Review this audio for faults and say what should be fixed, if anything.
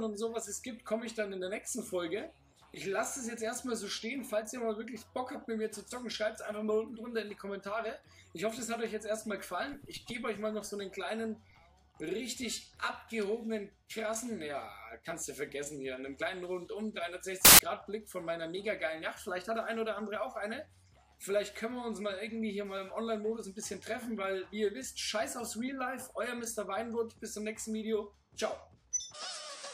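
A harsh burst of loud broadband noise replaces the audio from 17.45 to 17.59 s. These are samples built from the wrong bytes: the reader misaligned or swapped each sample's bytes, so the rapidly changing low bits became the dominant part of every value. To prevent it, check byte order and sample alignment wherever the stream is parsed or resynchronised.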